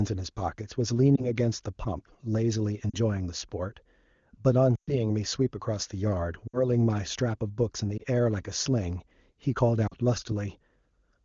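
Brief dips and warbles break up this speech recording at 1.15–1.31 and 7.98–8.03 s, and the sound drops to near silence at 2.89–2.96, 6.47–6.62 and 9.87–9.93 s. At 4.76–4.94 s the sound drops to near silence before recovering roughly. These are lost AMR speech frames. Radio errors corrupted 20 to 120 ms of data at a time, which fits one to six 20 ms frames. The decoder bridged each gap by repeating the last good pitch and vocal tract settings at falling gain, over otherwise clear AMR-WB audio.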